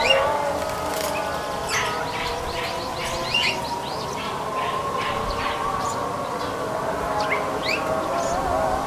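No technical faults can be heard anywhere in this audio. Nothing in the sound points to a dropout, distortion or any other break in the chain.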